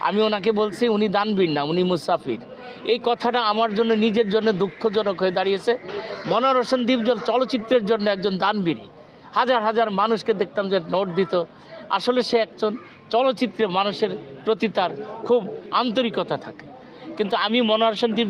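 No technical faults can be heard anywhere in the audio.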